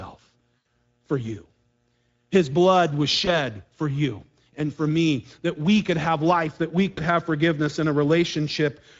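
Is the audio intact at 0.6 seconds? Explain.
No. From 0.62 to 0.67 s, just before "for you", VoIP packet loss concealed by the speech codec replaces the sound. The decoder repeats its last pitch and filter at falling gain, consistent with roughly 80 ms of lost packets, so a buzzy tone or coloured noise that fades results. A spectrogram shows the sound smeared across the gap, and the waveform shows a shrinking envelope. The Speex codec is also at work throughout, at a setting that points to around 16.8 kbps. Its plainly audible damage makes the speech hoarse and noisy, with the band above 4 kHz appearing as diffuse, structureless fill.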